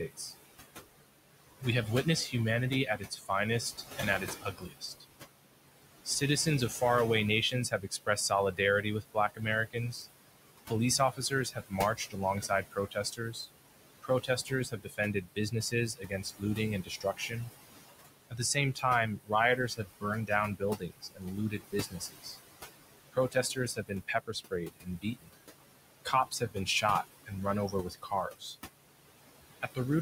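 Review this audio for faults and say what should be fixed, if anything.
Throughout, the background dips between phrases and swells under speech. These are noise suppressor artifacts from roughly 20 dB of frame-by-frame noise reduction.

Soft consonants and word endings sound swallowed at 0.08–0.33 s (down about 11 dB), 1.6–5.05 s (about 19 dB), and repeatedly from 6.05 to 28.56 s (about 22 dB). This is speech cut by the noise suppressor, which mistook quiet speech for noise.

Reduce the suppressor's depth well below 20 dB, or tune its speech detection, so that the room noise, which sits about 11 dB under the speech, is reduced gently without eating quiet speech.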